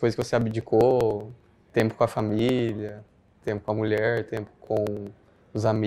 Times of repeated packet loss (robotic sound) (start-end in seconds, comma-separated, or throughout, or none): none